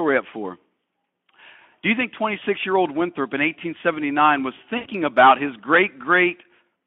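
At 2.39 to 2.44 s and again at 4.77 to 4.87 s, VoIP packet loss concealed by the speech codec smears the speech into a fading buzzy tone or coloured noise. Unlike a clean dropout, the gap is filled: the decoder extrapolates from the last pitch and filter, covering about 20 ms and then about 80 ms of missing audio through the narrowband Speex path.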